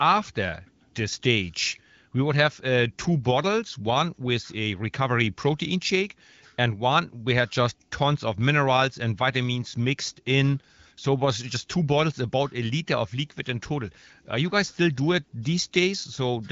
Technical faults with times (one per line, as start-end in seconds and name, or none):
none